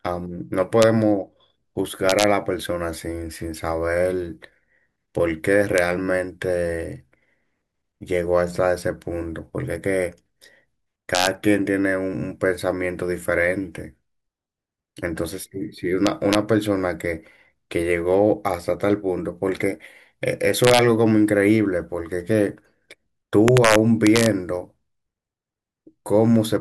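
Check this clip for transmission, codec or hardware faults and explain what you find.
Integer overflow is present: violent cracks, far harsher than clipping, burst out on the loudest peaks of the speech at 0.82 s, 2.10–2.24 s, 5.78 s, 11.15–11.27 s, 16.07–16.35 s, 20.64–20.79 s and 23.48–24.26 s. The peaks exceed full scale by only about 0 to 2 dB, but instead of being limited, each sample past the maximum integer wraps to the opposite extreme. That full-range jump produces the crack.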